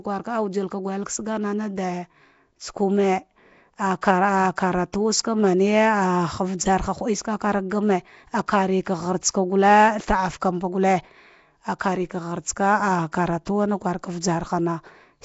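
From start to end the speech carries a rough, hissy halo and a smeared, underwater quality, likely from Nellymoser compression at a low bitrate around 32 kbps. Weak bands are filled with noise. A spectrogram shows speckled noise fill and nothing above 7.7 kHz.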